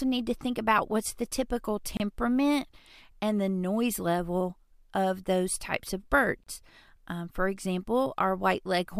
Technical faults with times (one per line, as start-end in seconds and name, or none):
1.97-2.00 gap at a join of encoded pieces
6.43-6.47 gap at a join of encoded pieces